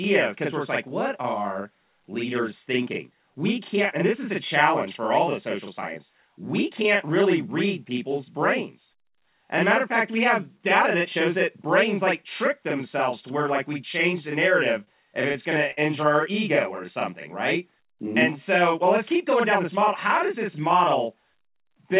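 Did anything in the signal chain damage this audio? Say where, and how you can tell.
Yes. A 40 ms channel delay (doubling) sits in the driver or buffer stage. One channel arrives a buffer late and is summed to mono, so every syllable slaps back at equal level. On the waveform each onset repeats 40 ms later. The spectrogram shows fine comb striations at 25 Hz spacing, all inside the 4 kHz ceiling of the G.711 call path.

Two short stalls from a late packet come from the network and jitter buffer. At 14.84 s, after "we change the narrative", the sound is held about 29 ms. At 15.71 s, between "going to" and "injure our ego or", it is held about 59 ms. Nothing is lost, and playback simply resumes later. On a spectrogram each stall is a frozen, flat smear, and on the waveform it shows as repeated identical cycles.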